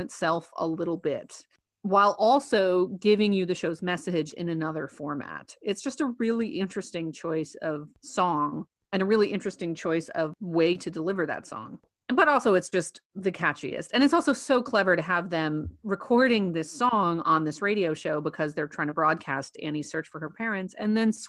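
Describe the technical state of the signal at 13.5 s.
At 13.5 s the signal is intact, with no audible technical fault at that moment.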